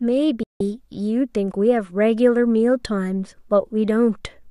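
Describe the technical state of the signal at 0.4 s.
A digital broadcast dropout begins at about 0.43 s and lasts until 0.61 s. The receiver muted after losing valid frames, with a fade of about 3 ms, so the speech drops abruptly into silence. On a waveform it shows as a flat line, and on a spectrogram as a blank vertical gap of roughly 170 ms, which fits several consecutive frames being lost.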